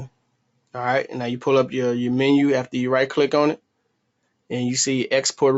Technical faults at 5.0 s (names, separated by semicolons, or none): none